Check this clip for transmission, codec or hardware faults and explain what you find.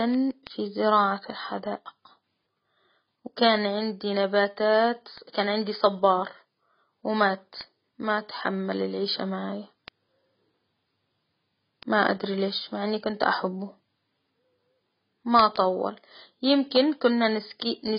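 Two problems run through this speech clip: a heavily compressed, band-limited sound, and a steady train of word clock ticks.

The whole clip sounds dull and smeared, with nothing above about 5.1 kHz and a warbly, fizzy edge on sibilants and held sounds. The likely cause is heavy AAC compression, AAC-LC at a very low rate, something that fits around 16 kbps. At that rate the encoder drops the top of the spectrum and starves the remaining bands, leaving holes and noise-filled patches.

From 0.14 s to 17.83 s there are sharp ticks of uneven strength, arriving roughly every 0.15 s, about a hundred in all. These are word clock ticks. The receiving device runs on its own clock rather than locking to the sender's, and the two drift apart by something like 150 ppm. Each time they slip a full sample, one sample is dropped or repeated, leaving a small discontinuity you hear as a tick.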